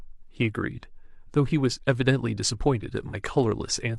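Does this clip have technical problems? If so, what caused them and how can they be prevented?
Yes. There is AAC frame loss with concealment from 3.09 to 3.14 s, about 43 ms, which fits a single lost frame. The decoder filled the gap from the previous spectrum, so the speech briefly smears into a noisy, phasey patch. Prevent it with reliable transport, such as retransmission or forward error correction.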